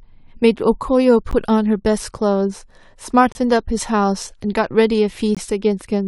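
Gaps between stream segments break this speech clip at 1.31 s, 3.32 to 3.35 s and 5.35 to 5.37 s, about every 2 s. Each is a hard-edged drop to silence, lasting roughly 14 ms, 27 ms and 20 ms. Consecutive 2 s segments are stamped with a slight gap, and the player pads the hole with silence. Nothing is lost; the sound simply pauses and resumes.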